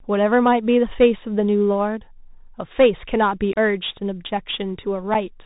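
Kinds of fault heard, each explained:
Bluetooth CVSD headset codec: throughout the speech the sound is narrow and thin, with nothing above 4 kHz, a granular hiss lying underneath, scratchy s sounds and distortion on loud, bright moments. This is the narrowband headset codec at 64 kbps, which sends one bit per sample saying only whether the waveform steps up or down. Its adapting step size can't keep up with fast, loud high-frequency movement, and the damage is plainly audible here.
Unconcealed Bluetooth headset packet loss: the speech drops into abrupt holes with hard edges, about 26 ms long at 3.53 s and about 7.5 ms long at 5.14 s. After each, the sound returns briefly quieter. Short voice packets between headset and phone went missing and were replaced with silence or an idle pattern rather than being patched over. The longer gap suggests a run of several packets lost together, the shorter one just a couple.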